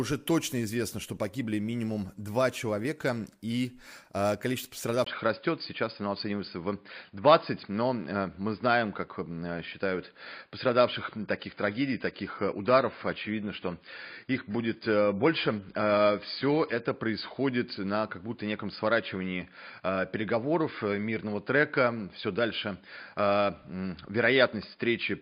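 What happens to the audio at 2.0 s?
Nothing goes wrong at 2.0 s; the audio plays through that moment intact, with no dropout, click or distortion.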